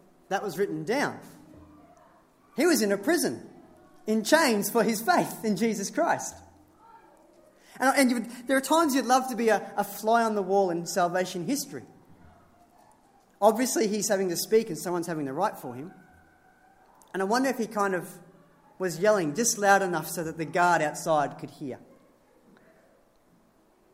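Nothing in this audio stands out as a technical fault at any point, so there's nothing to flag here.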